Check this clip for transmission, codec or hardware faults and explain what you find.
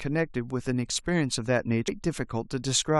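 One fault turns up, a stream segment skipped at 1.87 s. The speech jumps forward with a brief blip, likely because a segment failed to load; unlike a dropout, nothing goes silent and the missing stretch is simply gone.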